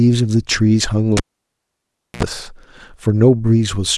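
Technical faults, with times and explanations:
1.17–2.23 s, cable pulled and plugged in: a pop at 1.17 s marks the connector leaving its socket. The signal then falls to near silence for about 1.01 s while the line is open. As the plug goes back in, a 64 ms burst of 60 Hz mains buzz appears because only the tip makes contact, leaving the ground unconnected so hum is picked up. A second pop lands at 2.23 s as full contact restores the speech.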